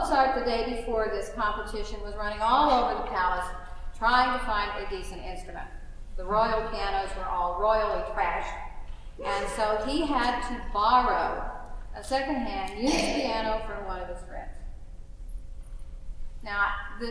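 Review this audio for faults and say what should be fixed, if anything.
No faults found; nothing needs fixing.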